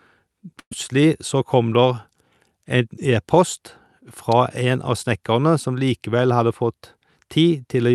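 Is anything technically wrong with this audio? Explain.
Yes, there are two problems in this speech clip.

From 0.59 to 0.73 s, just before "så kom", there's a burst of packet loss. The receiver papers over roughly 120 ms of missing audio by stretching the last sound and fading it, so you hear a smeared, dying tail, then speech picks up with that stretch gone.

At 4.32 s there's a sharp snap sitting on top of the speech, likely an electrical switching spike: a nearby switch or static discharge arcing briefly and getting picked up by the audio line. Note that the call went through Opus at 48 kbps, with the top end stopping around 12 kHz.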